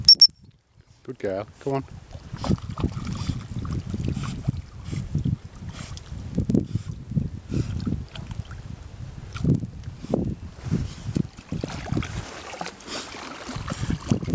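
Throughout, the resampler restarted on every 50 ms block, leaving edge errors heard as 20 Hz ticks with signal, seen as evenly spaced vertical lines on a spectrogram.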